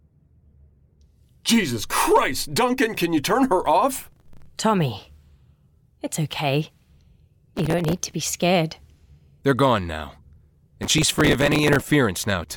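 Gritty bursts of crackle tear through the speech from 3.98 to 4.46 s, just after "can you turn her", then from 7.56 to 8.22 s and 10.83 to 11.91 s. This is processor overload crackle. Dozens of buffers of a few milliseconds each missed their deadlines, and each replayed stale audio with hard edges.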